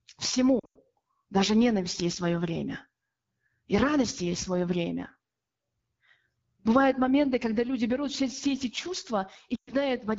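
Throughout the clip, the speech carries the coarse, raspy texture of the AMR wideband (HD Voice) codec at a low rate, consistent with 8.85 kbit/s. Unlike narrowband coding, the top still reaches 7 kHz, but the band above 6.4 kHz is a smooth noise fill rather than real detail.

From 0.59 to 0.78 s, lost AMR speech frames break up the sound. The longest gap, 100 ms, drops to near silence within two frames, and the speech returns rough. A similar loss occurs between 9.56 and 9.74 s. A plain dropout would cut to silence abruptly instead of decaying like this.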